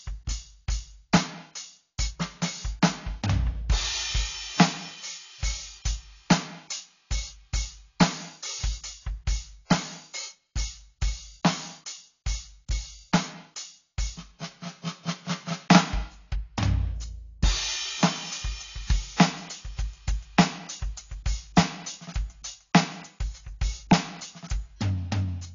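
Throughout, the music stops dead at 7.2 kHz and sustained tones warble and smear, likely from AAC compression at a bitrate near 32 kbps.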